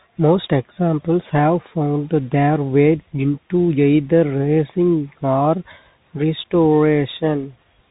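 Bluetooth CVSD headset codec damage runs throughout this speech clip. Each sample is coded as a single up-or-down bit with an adapting step, so nothing above 4 kHz survives, s sounds turn scratchy, loud bright moments distort, and granular hiss sits underneath, consistent with a 64 kbps CVSD link.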